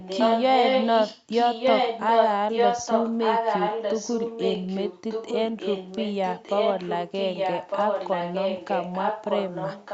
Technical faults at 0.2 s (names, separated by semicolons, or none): echo leak